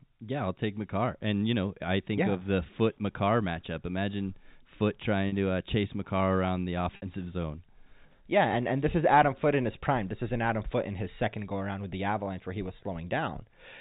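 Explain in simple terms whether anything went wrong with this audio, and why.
At 5.28 s, just before "to uh chase", and again at 6.96 s, the speech briefly hangs on a slightly buzzy, held sound for about 40 ms, then for 60 ms it holds and fades into silence. This is packet loss with pitch repetition: audio chunks went missing, and the receiver bridged each gap by repeating the last vocal cycle.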